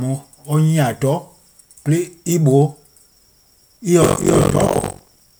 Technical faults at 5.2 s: buffer tearing

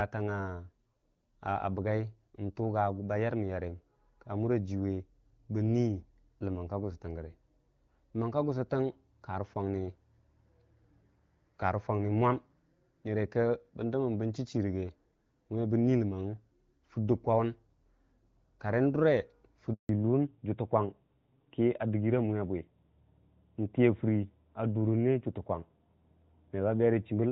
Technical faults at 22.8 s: fallback to narrowband

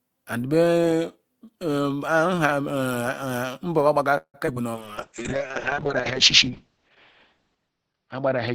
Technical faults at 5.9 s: call bitrate drop; jitter buffer slow-down

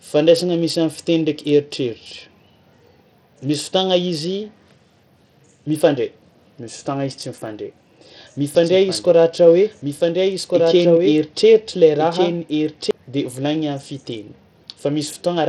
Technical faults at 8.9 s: Bluetooth SBC compression; doubled audio track

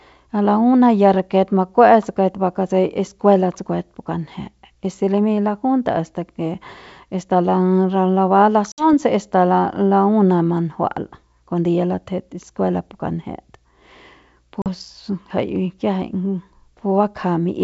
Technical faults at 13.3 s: none

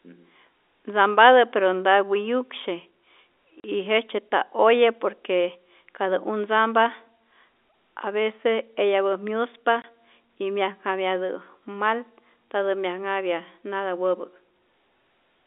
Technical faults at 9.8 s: packet loss filled with silence

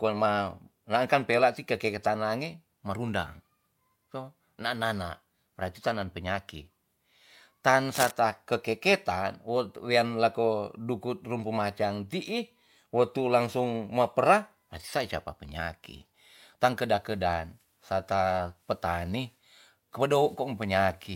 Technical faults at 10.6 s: none

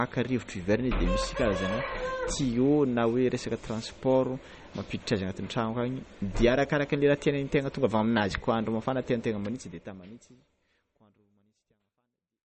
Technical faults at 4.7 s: MP3 compression

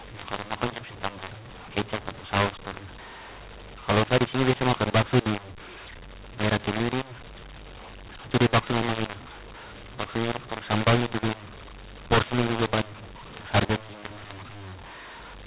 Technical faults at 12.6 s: mu-law and A-law mixed up

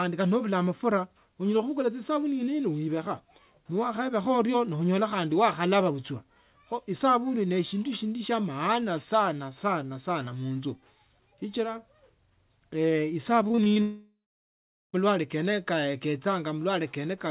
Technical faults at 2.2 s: none

